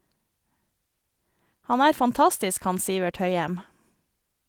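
This speech clip has no technical faults. Opus voice compression is working as intended and leaves only a light trace of coding, with the band extending up to about 20.2 kHz, which fits a fullband hybrid stream at around 24 kbps.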